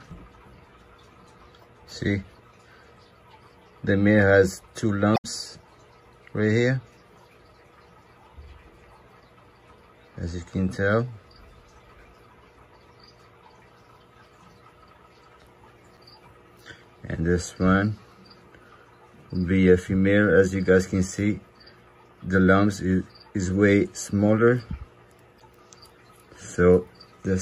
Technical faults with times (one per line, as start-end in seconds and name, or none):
5.14-5.25 damaged data in a compressed stream
15.94-15.98 damaged data in a compressed stream
25.37-25.42 damaged data in a compressed stream